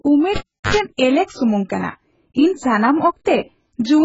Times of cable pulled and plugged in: 0.36-0.75

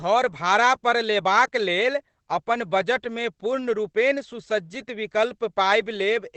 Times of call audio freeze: none

